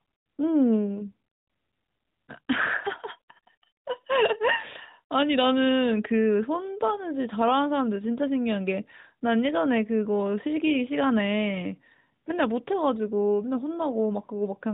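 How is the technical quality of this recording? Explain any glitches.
No glitches or faults can be heard in this speech recording.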